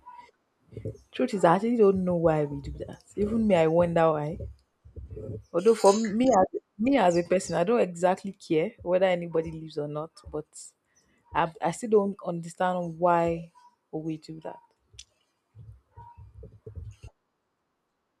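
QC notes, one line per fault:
No technical faults are audible in the signal.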